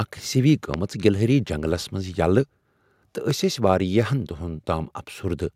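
At 0.74 to 0.76 s, just before "گلہری جنگلس منٛز", and again at 3.31 to 3.33 s, a loud pop cuts through the speech, roughly 15 dB and then 10 dB above it, most likely from an electrical transient such as a plug, switch or static discharge. Each appears as a tall spike in the waveform and a thin full-band vertical stripe on a spectrogram, with the speech continuing beneath.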